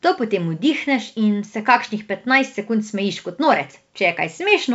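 No faults can be heard in this speech recording.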